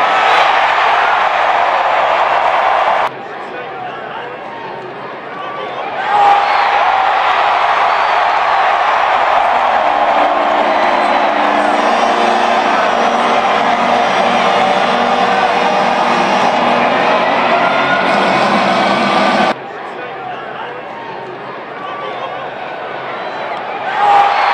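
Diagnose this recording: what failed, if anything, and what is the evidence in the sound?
Two brief glitches break the sound, one from 2.98 to 3.01 s and another from 5.76 to 5.81 s, each only a few tens of milliseconds long. The failure sits at the codec stage: damaged data in a compressed stream. Bytes in those stretches of the encoded file were corrupted, so the decoder misread the affected frames and lost sync. Until it found the next valid frame header, it produced garbled output.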